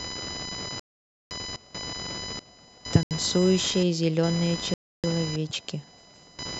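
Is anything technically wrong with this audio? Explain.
Yes, two problems stand out in this speech clip.

Computer activity noise runs the whole way through: a buzzy, scratchy whine pulsing at around 1 kHz, and it's not subtle, sitting only somewhat below the speech. The computer's load shifts (processor, graphics, mouse movement) are pushing current around a ground the audio circuit shares, so that hum tracks what the machine is doing rather than anything in the speech itself.

Then there are three dropouts where the speech cuts to dead silence: 0.80 to 1.31 s (about half a second), a brief one from 3.03 to 3.11 s, and 4.74 to 5.04 s (about 0.3 s). That pattern is most likely a Bluetooth stall. Interference held up packets, the headphone buffer emptied, and playback froze until the retransmitted data arrived.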